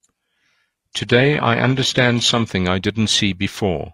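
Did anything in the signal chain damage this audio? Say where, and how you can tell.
Yes. An adaptive stream starting at a low bitrate gives synthetic treble and stronger codec artefacts until 2.5 s, which fits HE-AAC near 16 kbit/s. Quality then jumps without a gap.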